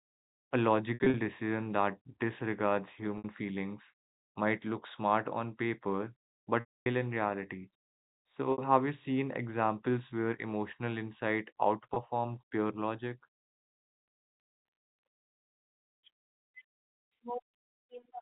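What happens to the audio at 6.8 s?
At 6.8 s the audio is inside a stretch of packet loss with pitch repetition, running from 6.6 to 6.86 s. About 260 ms of audio is missing, which fits a run of roughly 13 packets of 20 ms each. The receiver fills the gap by repeating the last pitch period. That gives a brief held, buzzy tone, which fades out over about 50 ms. Silence follows. The speech then returns through a short cross-fade, still band-limited by the telephone coding.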